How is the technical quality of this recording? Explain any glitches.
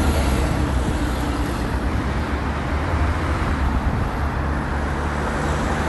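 One glitch stands out: a section at the wrong speed. From 1.89 s to 3.61 s the sound suddenly runs faster and higher, pitched up by about two semitones and hurried along at 1.13 times its proper rate, then drops back to normal when the section ends. Speed and pitch shift together at both edges, the mark of playback at the wrong rate. The likely cause is that this stretch was played or edited against the wrong clock.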